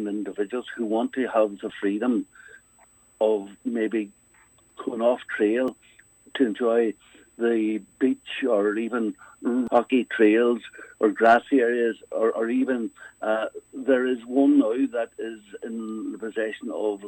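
From the first moment to the last, a steady USB whine sits underneath the sound: a fixed, thin tone at 8 kHz, about 40 dB below the programme. It comes from the bus drawing current in 125-microsecond microframes, a pulse train that leaks into the audio through the shared power or ground. On a spectrogram it appears as one unbroken horizontal line at 8 kHz across the whole clip. In the waveform it is too small to see.

At 1.70 s the sound skips forward, and the same jump recurs at 5.68 s, 9.67 s and 13.66 s, one every 4 s. Each time roughly 15 ms of audio is gone and the two sides are butted together with no gap. The regular spacing points to the likely cause: audio missing between chunks, lost as the recording moves from one 4-second block to the next. The waveform shows an abrupt discontinuity at each joint. A spectrogram shows a thin vertical seam there.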